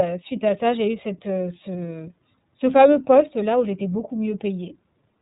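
Speech coded throughout with the iLBC codec, its plainly audible roughness consistent with the 13.33 kbps, 30 ms-frame mode. Each frame's excitation is coded independently, giving a slightly synthetic texture. A spectrogram shows a hard ceiling at 3.8 kHz with nothing above.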